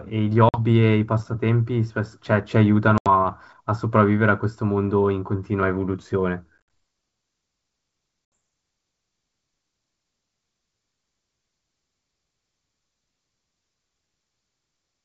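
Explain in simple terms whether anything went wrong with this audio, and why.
The speech drops out four times, at 0.49, 2.98, 6.58 and 8.35 s, for about 50, 80, 90 and 70 ms. This is packet loss on an ADPCM call: chunks of sound never arrived and were replaced by silence. When the sound resumes, the G.722 wideband decoder has lost track of the sender, so each return is slightly distorted for a moment.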